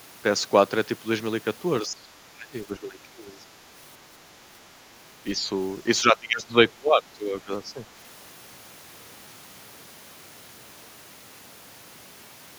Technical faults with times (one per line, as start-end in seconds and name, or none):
1.83-2.08 speech suppressed in double talk
2.33-3.44 speech suppressed in double talk
5.23-5.42 speech suppressed in double talk
6.01-7.80 speech suppressed in double talk